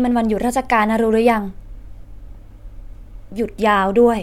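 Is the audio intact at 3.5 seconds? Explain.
Yes, the audio is intact at 3.5 seconds, with no audible fault at that moment.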